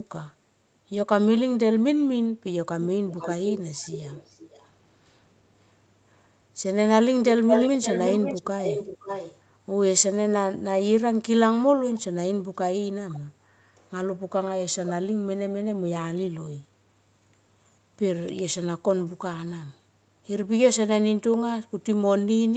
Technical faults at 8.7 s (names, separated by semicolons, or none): echo leak